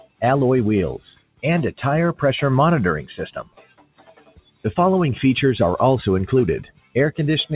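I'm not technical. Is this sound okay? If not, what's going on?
No. Throughout, the audio pumps and thins out: sudden hits come through, but held sounds and their fading tails keep sinking away. This is a noise suppressor applied to music or sounds. A filter built for calls mistakes steady sound for background hiss and keeps turning it down.

The worst moments are the sound cut by the noise suppressor at 0.0 to 0.22 s, 1.15 to 1.44 s, 3.39 to 4.65 s (the longest) and 6.63 to 6.96 s. There the sound drops sharply or its ending is chopped short, because the suppressor judged it to be noise. The audio also sounds somewhat muffled because the call line carries nothing above 4 kHz, but that is normal for this kind of connection.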